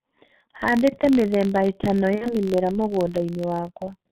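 Right from the start the whole clip has that G.723.1 codec sound: everything above 4 kHz is gone, consonants smear, and the slow-updating voice model leaves the speech muffled and hoarse. The damage is heavy, which fits the low 6.3 kbit/s mode.

Under that, also for the full length, there's a filter restarted on every block. Each block begins from silence with a little transient, so you get a steady buzz at about 46.9 Hz that tracks the loudness, which fits a 1024-sample buffer.

From 2.15 s to 2.41 s there's VoIP packet loss concealed by the speech codec. About 60 ms of audio went missing, which fits two lost 30 ms frames. The decoder guesses from its last pitch and filter, producing a fading buzzy smear, and the speech stays weak and distorted well after the gap itself.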